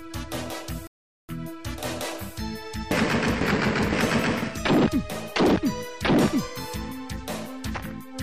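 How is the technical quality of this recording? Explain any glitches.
One dropout: from 0.87 to 1.29 s the sound cuts to silence for about 0.42 s, then resumes, a likely Bluetooth stall where delayed packets let the headphones' buffer run empty.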